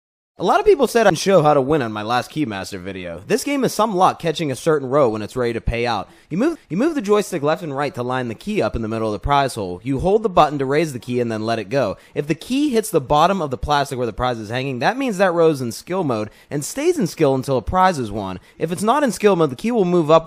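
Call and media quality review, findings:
CD skip at 1.1 s and 6.55 s. Symptom: brief tick, momentary dropout of a few milliseconds, then playback resumes at a different point in the sound. Probable component: disc transport and laser pickup. Mechanism: a knock or disc flaw throws the laser onto another turn of the spiral track; the player mutes briefly, then continues from the new track position, displaced by whole disc revolutions.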